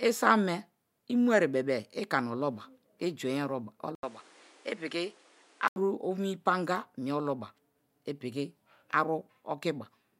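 At 3.95 s the speech drops out for about 80 ms, then comes back duller, with nothing above 11.4 kHz and a new layer of background noise sitting roughly 30 dB under the speech. The level stays about the same, so it's the tone that gives it away. At 5.76 s the full brightness returns. That's likely the input switched to a poorer device for those couple of seconds, a narrower-band microphone with its own noise floor.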